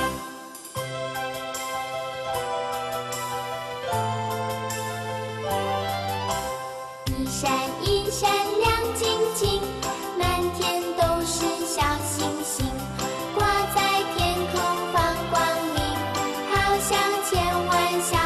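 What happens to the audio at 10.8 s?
Nothing goes wrong at 10.8 s; the audio plays through that moment intact, with no dropout, click, distortion or other fault.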